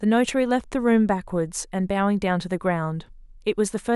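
No technical fault can be heard anywhere in the speech recording. There is nothing to place in time and no value to report.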